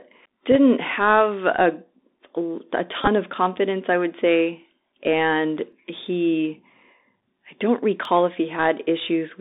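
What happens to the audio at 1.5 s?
At 1.5 s the speech carries Bluetooth CVSD headset codec damage, present across the whole clip. Coding one up-or-down bit per sample, consistent with a 64 kbps link, turns s sounds scratchy over a granular hiss, and the narrowband link confines the sound to roughly 250 Hz to 3.7 kHz.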